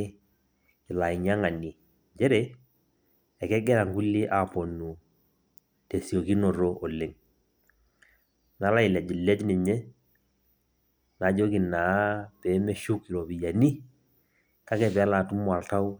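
No technical faults can be heard anywhere in this speech recording. There is nothing in the audio that calls for a timestamp or a further description.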